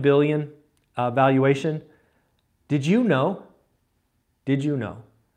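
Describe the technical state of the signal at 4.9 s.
At 4.9 s the speech signal is intact, with no audible technical fault at that moment.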